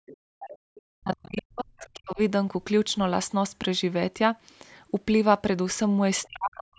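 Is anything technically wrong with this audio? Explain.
Yes. Three kinds of fault appear.

Background gated by the echo canceller, 0.00 to 0.66 s. The canceller heard its loudspeaker playing and cut the microphone hard. The room sound drops by up to about 38 dB, in dips totalling under half a second, then returns.

The other side's voice leaking through, 0.06 to 0.82 s, 1.37 to 1.42 s, 1.78 to 1.89 s and 6.23 to 6.27 s. A faint second voice is heard, about 20 to 30 dB below the talker. This is likely loudspeaker sound the echo canceller failed to remove.

Speech suppressed in double talk, 0.94 to 2.18 s and 6.28 s to the end. The talker's voice dips by up to about 40 dB, in pieces totalling around a second, then about 0.4 s. The likely cause is both sides talking at once, so the canceller turned everything down.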